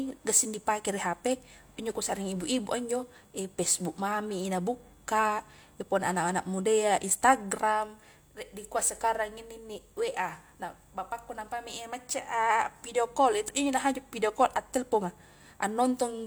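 No technical faults detected.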